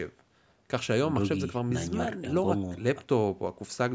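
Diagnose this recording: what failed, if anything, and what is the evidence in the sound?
Nothing failed here: the speech has simply been through a call's microphone processing, which trims away the deepest bass and leaves nothing above 8 kHz, and that's just how that stage normally sounds.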